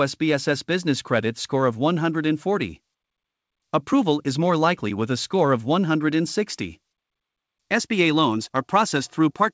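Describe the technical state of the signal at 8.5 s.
At 8.5 s the speech sits inside a run of repeated timing corrections lasting from 0.18 to 9.53 s. The receiver trims short pieces so playback runs at about 103% speed, heard, if at all, as slight hiccups or an unsteady tempo, with small splice seams in the waveform. The cause is clock drift between sender and receiver: the sender's clock runs roughly 4 percent fast, so the jitter buffer keeps overfilling. On a spectrogram this shows as unevenly spaced vertical discontinuities in the harmonics, all below the codec's 8 kHz ceiling.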